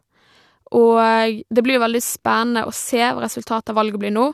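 No technical faults can be heard anywhere in the speech, so there is nothing to describe in time order.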